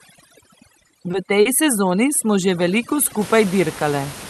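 From the start to 3.21 s, overdone noise removal is at work. The suppressor was set too hard against room noise sitting about 16 dB below the speech. It cuts bands near its noise estimate, taking quiet speech detail too. The background drops and breaks up into twinkling specks.

Three short stalls from late packets fall within that stretch, at 0.87 to 0.91 s, 1.11 to 1.15 s, and 1.41 to 1.47 s. Each time the jitter buffer ran dry. The receiver stretched the last sound, by 20 ms, 20 ms, then 40 ms. Nothing is lost. A sound is simply held too long, with a faint buzz or dip.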